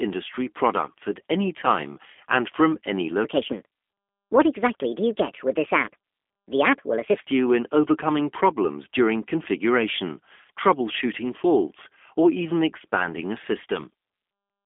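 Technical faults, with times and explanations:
Throughout, G.729 codec: the speech is rebuilt by a low-rate speech model from a vocal tract filter, a pitch predictor and a few pulses per frame, which fits an 8 kbit/s G.729A stream. The roughness and synthetic buzz are plainly audible. Nothing passes above 3.6 kHz, and the line band of 250 Hz to 3.5 kHz thins the lows. A spectrogram shows a hard ceiling near 3.6 kHz and smeared, grainy harmonics.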